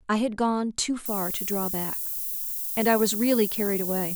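From 1.06 s to the end, the speech carries low bit depth with noise shaping. The signal is reduced to about 5 bits, and the rounding error is fed back so that its energy is pushed toward high frequencies. The result is a thin, steady hiss, nearly as loud as the speech, that grows sharply brighter toward the top of the band. Unshaped truncation would give a flatter, grittier noise that follows the signal. Here the hiss tilts strongly upward.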